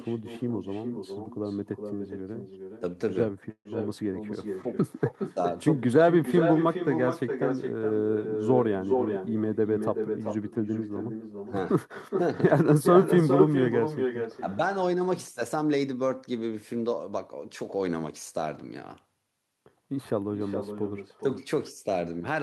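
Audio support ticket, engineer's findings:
Echo with no canceller, whole call. Quieter, thinner copy of the speech trails it by around 400 ms, about 7 dB down. Far end on loudspeaker, mic picking it up, no echo cancellation stripping it before it returns.

Call audio freeze at 3.51–3.67 s. Sound stretches into a fading buzz or hiss, goes silent for 70 ms, then resumes exactly where it stopped. About 138 ms filled, nothing lost, latency up by that much. Likely late packets draining the jitter buffer.

Jitter buffer speed-up, 9.09–10.76 s. Speech runs about 8% fast at unchanged pitch, hurried. Buffer overfilled, so the receiver snipped out short pitch-period chunks, around 150 ms in total, to bring the delay back down.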